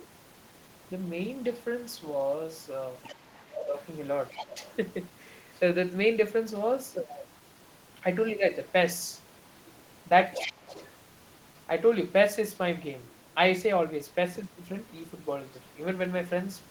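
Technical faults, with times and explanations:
3.03–3.15 s, 4.3–4.75 s, 10.33–10.51 s and 10.68–10.91 s: other side's voice leaking through. A fainter second voice surfaces in brief scraps, about 10 to 20 dB below the talker. This is likely loudspeaker playback reaching the microphone that the echo canceller failed to remove completely.
3.36–3.76 s, 4.4–4.59 s and 10.38–10.72 s: speech suppressed in double talk. The talker's level dips sharply, by about 15 to 25 dB at worst, for a few tenths of a second. With both sides active, the canceller likely could not separate them and turned everything down.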